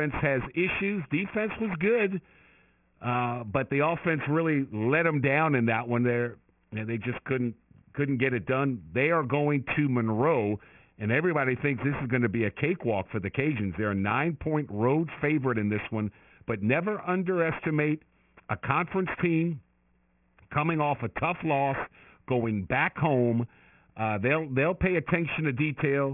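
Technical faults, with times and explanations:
Throughout, aliasing: the speech sounds gritty and metallic on the s and sh sounds, because energy above 3 kHz folds back into the band as unrelated tones, sitting roughly 15 dB under the voice. That fits a drop to 6 kHz sampling without anti-alias filtering.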